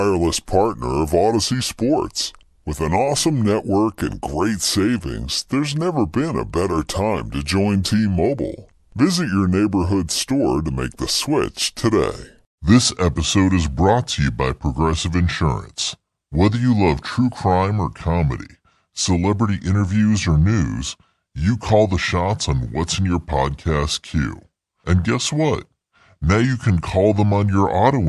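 From start to end, the speech plays too slow and too low. This is a wrong sample rate: audio recorded at 44.1 kHz is played at 32 kHz without conversion. Speed drops to 0.726 times normal. Pitch falls about 5.5 semitones. Voices sound heavy and dragged.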